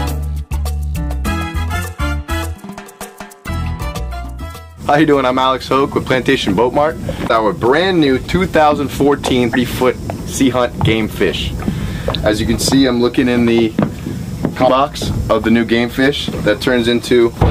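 Four short bursts of damaged data in the compressed stream turn up, at 3.44 to 3.49 s, 7.25 to 7.31 s, 9.50 to 9.56 s and 14.64 to 14.70 s. Each lasts about 55 ms: the decoder chokes on corrupted frames, loses sync, and spits out a brief glitch until it finds a clean frame header.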